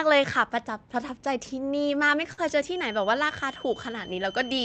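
At 2.33 s to 2.40 s the speech hits a short stall from a late packet. The next packet had not arrived when playback needed it, so the jitter buffer ran dry and the receiver stretched the preceding sound for about 46 ms until the data came in, then resumed at the same point. Nothing is skipped, but one sound is held audibly long with a faint buzzy dip, and playback sits 46 ms later afterward, over a call path whose band tops out near 8 kHz.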